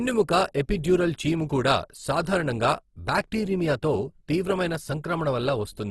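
Opus compression runs through the whole clip, likely the cause of the damage heard here. The speech has a rough, grainy texture, with tonal parts turning noisy rather than swirling. At a bitrate that sounds close to 16 kbps, the encoder keeps each band's energy but fills starved bands with folded or noise content, in the manner of its music mode. Nothing is present above 12.2 kHz.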